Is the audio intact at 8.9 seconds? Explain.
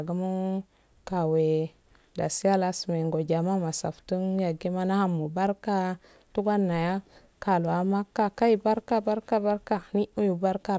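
Yes, the speech at 8.9 seconds is intact, with no dropout, click, distortion or other fault at that moment.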